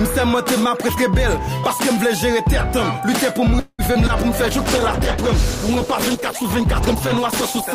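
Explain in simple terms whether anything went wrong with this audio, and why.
Three things go wrong, all from about the middle on.

At 3.59 s the sound stops moving forward for about 0.19 s, until 3.81 s. The last sound is stretched into a fading buzz, and the final 40 ms are silent. This is a call audio freeze. The likely cause is that data was held up on the way, and the receiver ran out of sound to play. When the data arrived, playback picked up where it had stopped. Nothing was lost. The rest of the clip just runs about 0.19 s late.

Right after that come two brief dropouts, at 3.93 to 3.97 s and 4.07 to 4.11 s. Each is short concealed packet loss. About 20 ms of sound never arrived in time each time. The receiver patched each hole by carrying the previous sound forward, then blended back in. You hear a tiny smear or wobble rather than a clean gap.

From 4.42 s to the end, the sound turns rough and muffled. 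This is a call bitrate drop. The connection looked weaker, so the sender was told to use far less data. With so little data, detail is coded crudely and the high, crisp frequencies are cut off. The quality sits at its lowest for about 3 s and never recovers before the clip ends.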